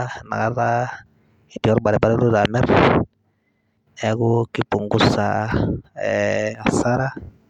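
At 5.51 s, new audio failed to reach the output device in time, so it played its most recent buffer again, a repeated buffer fault. The repeated piece is about 1.33 ms long, which fits a 64-sample buffer, and it plays several times back to back with a hard join at each pass. The speech then continues with essentially nothing missing. Because the looped fragment is so short, it is heard as a brief click or tiny buzz rather than a stutter.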